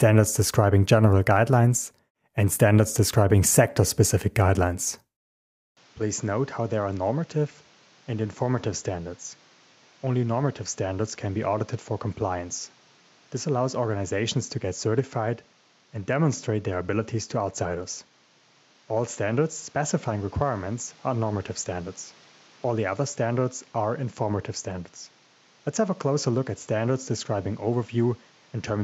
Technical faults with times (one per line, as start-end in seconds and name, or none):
5.77-28.84 input switched to a poorer device